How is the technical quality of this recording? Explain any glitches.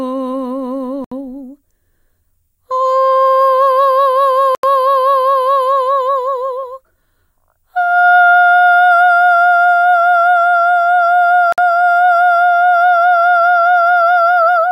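The music drops out three times: at 1.04 to 1.12 s (about 71 ms of silence), 4.55 to 4.63 s (84 ms) and 11.52 to 11.58 s (55 ms). Each is a clean cut to nothing and then the sound comes back, which points to a Bluetooth stall. The likely cause is radio interference delaying packets, so the headphones' buffer emptied and playback sat silent until the retransmitted audio arrived.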